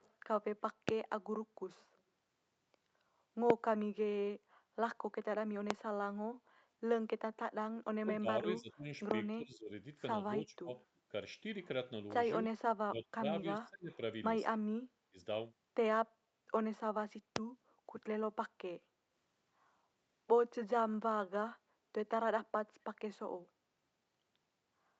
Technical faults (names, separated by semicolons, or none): echo leak; loud pop; speech suppressed in double talk